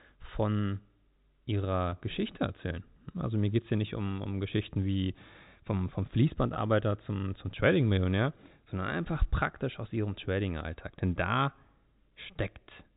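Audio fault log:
1.90 to 1.92 s and 6.54 to 6.56 s (between "wie vom vom" and "zum zum"): packet loss with pitch repetition. Each time, a 20 ms packet went missing and the receiver filled the gap by repeating the last pitch period, giving a brief, slightly held, buzzy sound instead of a silent dropout.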